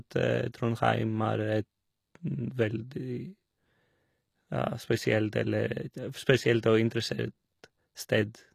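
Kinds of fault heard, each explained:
HE-AAC compression: Throughout the speech the upper frequencies sound bright but synthetic, with s sounds coming out gritty and metallic, and the damage is plainly audible across the whole clip. The likely cause is HE-AAC coding at a low rate, consistent with about 24 kbps. Only the lower spectrum is actually coded, and the treble is regenerated by copying lower bands upward under a coarse envelope, so its harmonics no longer match the originals.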